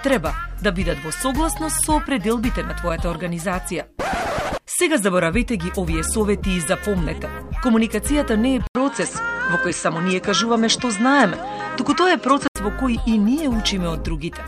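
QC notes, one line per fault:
8.67 to 12.56 s, input switched to a poorer device: An 80 ms gap opens at 8.67 s, then the sound turns duller. Nothing reaches above 8.7 kHz in this stretch. A new background noise sits well below the signal, around 40 dB down. The loudness stays about the same. At 12.56 s the full band returns. The likely cause is the input moving to a narrower, noisier device, then back again.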